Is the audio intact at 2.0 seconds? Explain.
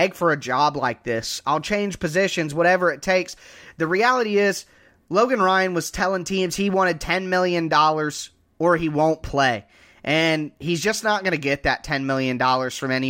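Yes, at 2.0 seconds the speech plays through intact, with no dropout, click, distortion or other fault at that moment.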